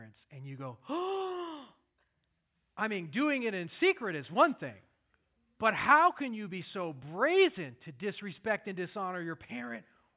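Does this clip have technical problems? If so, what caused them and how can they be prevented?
No, this clip has no technical problems, so there is nothing to trace back or prevent.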